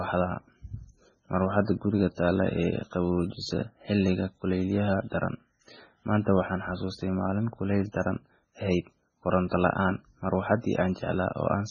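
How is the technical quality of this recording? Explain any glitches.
Poor: throughout, the speech sounds watery and swirly with smeared attacks and no treble above 9.3 kHz, likely heavy MP3 compression at a bitrate around 16 kbps, dropping weak frequency lines.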